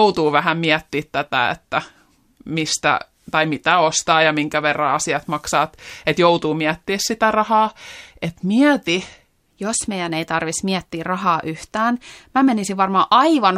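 From the start to 9.51 s, a section at the wrong speed: the speech runs at 0.893 times its recorded rate, so it sounds slowed and about two semitones deep, likely from playback against the wrong clock. Normal speed returns at "jos meidän ei tarvitsisi".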